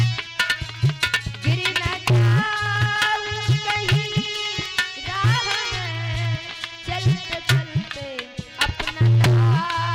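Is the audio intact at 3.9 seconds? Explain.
No, not quite. At 3.9 seconds you're right in the middle of a run of periodic USB or driver dropouts that lasts from 0.06 s to 9.85 s. Every 0.10 s, something stalls the USB bus or audio driver, and a tiny sliver of audio, a fraction of a millisecond, is skipped. That adds up to around a hundred small gaps, heard as a steady ten-per-second ticking that only shows up while there's signal.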